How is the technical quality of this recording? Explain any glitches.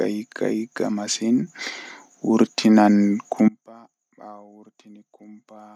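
Two faults affect the speech: a sudden level jump and a dropout that lasts to the end.

At 1.47 s the microphone volume is stepped up by 6 dB in one move, as the call software reacts to a quiet input by raising the device gain. Voice and background noise jump together, with no gradual ramp.

From 3.48 s to the end there is an audio dropout to a faint residue. The speech cuts off abruptly, leaving only a faint sound roughly 30 dB below the normal level. This is likely a loss of the wanted signal while the downstream path stayed live.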